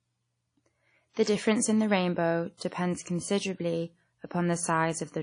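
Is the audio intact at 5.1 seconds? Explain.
No. At 5.1 seconds the speech carries a fault that runs through the whole clip: low-bitrate audio saved at a high bitrate. Nothing sounds above about 10.1 kHz, so sibilants and breaths lose their air and sound dull. This is likely a low-bitrate first encoding, such as 32 kbit/s WMA, re-encoded to 320 kbit/s MP3, which cannot restore what was discarded. On a spectrogram, the energy stops at a flat ceiling near 10.1 kHz with empty space above it.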